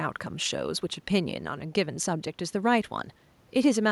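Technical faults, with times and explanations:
No technical faults are audible.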